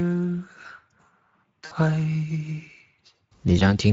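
Speex codec damage runs through the whole of this short speech recording and is plainly audible. With too few bits to describe the excitation, the codec rebuilds the voice from a coarse model, so it comes out noisy and hoarse, and any content above 4 kHz is only a shaped noise fill. The degree of roughness fits Speex running at around 17 kbps. VoIP packet loss concealed by the speech codec appears at 1.65 to 1.73 s, a gap of about 60 ms that points to three consecutive lost frames, and again at 3.59 to 3.64 s, a single frame of about 20 ms. In each case the decoder extends its last pitch and filter with falling gain, stretching the voice out as it fades. Because each frame builds on the previous one, the sound stays weak and distorted briefly after the packets resume.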